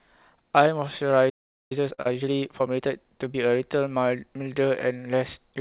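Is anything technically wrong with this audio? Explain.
Yes, there are four faults, all clustered between about 1.3 and 3.4 seconds, heard through a narrowband path with nothing above 4 kHz, consistent with G.711 telephone coding.

From 1.29 to 1.72 s there is a playback stall: the speech stops mid-flow and the output goes silent for about 0.41 s before resuming. The player has likely run out of buffered data or had its output thread blocked. What separates this from a dropout inside the call itself is the length and cleanliness of the gap. It is a true silence of several tenths of a second, not a brief smear or held sound.

From 1.72 to 3.41 s comes time-compressed catch-up. To work off the backlog left by the stall, the player trims small slices out of the signal and cross-fades across the joins, so the speech runs about 1.25 times faster while keeping its normal pitch. That preserved pitch is the key difference from a sped-up tape or a sample-rate error, which would raise the voice. 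Here the delivery is hurried.

Inside that stretch, from 1.94 to 2.00 s, is a short stall from a late packet. A packet missed its playout time and the jitter buffer ran dry, so the receiver stretched the last bit of sound for about 38 ms until the data arrived, then carried on from the same point. Nothing is lost. Instead of a gap, you hear a sound held slightly too long, with a slight buzz or dip. The added delay of about 38 ms shifts everything after it.

Right after, from 2.02 to 2.07 s, is short concealed packet loss. Here about 20 ms of audio genuinely never reached the decoder, and the receiver synthesised roughly 32 ms to cover the hole, extending the preceding sound and blending back into real audio. Unlike the late-packet stall, material is actually missing. It comes across as a brief smear or wobble, and a short consonant there may simply vanish.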